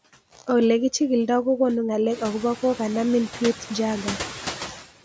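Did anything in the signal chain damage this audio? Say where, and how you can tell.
Yes, in the call processing stage. Throughout the speech, the background noise ducks in the gaps and swells back under each phrase. That pumping comes from noise suppressor artifacts: a frame-by-frame suppressor pulls down the bands it judges to be steady noise, here by only about 5 dB, so the residue is shaped rather than removed. It is easiest to hear after roughly 2 s, where the room noise climbs by about 16 dB.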